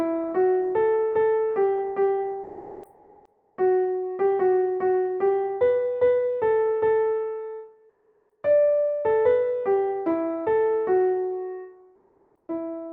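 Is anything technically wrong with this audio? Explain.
Yes. Comfort noise in place of the background occurs at 2.43–3.57 s, 7.89–8.43 s and 11.95–12.47 s. The real background gives way to smoother synthetic noise, about 1 dB quieter, about 6 dB quieter, then about 3 dB louder. This is likely discontinuous transmission, with the receiver generating filler during pauses.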